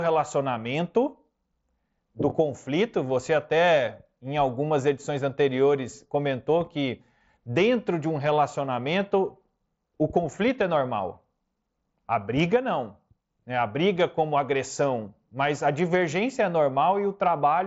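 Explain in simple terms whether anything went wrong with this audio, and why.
Concealed Bluetooth headset packet loss at 2.30 s: a tiny gap, which fits two lost packets, was filled by repeating the last bit of sound, leaving a brief, buzzy blip.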